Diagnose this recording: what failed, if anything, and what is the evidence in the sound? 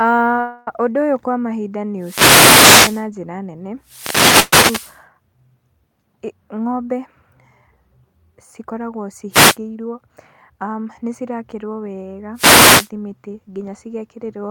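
Call audio freeze at 0.40–0.68 s and again at 4.40–4.53 s. In each, the sound stalls and the last moment is stretched into a fading buzz-like fill, about 265 ms and then about 126 ms long, after which the speech resumes where it stopped with nothing lost. The likely cause is at the network and jitter-buffer stage: packets arrived late, the buffer ran dry, and the receiver padded the wait, so each stall adds its length to the playout delay.

Wireless microphone noise hit at 1.98–3.07 s, between "ũyũ kwa mahinda nĩ" and "njĩra nene"; at 3.82–5.02 s, just after "njĩra nene"; at 9.31–9.57 s; and at 12.34–12.90 s. Each is a swish of static rising over the speech. This is an analogue radio-link fault ahead of any digital stage. The FM carrier faded as reflected paths cancelled it, and receiver noise came up through the audio until the signal recovered.

Jitter buffer speed-up at 9.69–10.10 s and 13.27–14.45 s. 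The speech runs about 12 and 13 percent fast at unchanged pitch, so it sounds hurried, trimming roughly 50 ms and then roughly 150 ms. This happens at the buffer stage of the call path. After delayed packets arrived in a bunch, the buffer held more audio than its target, and the receiver cut many small pitch-period slices in a row to bring the delay back down.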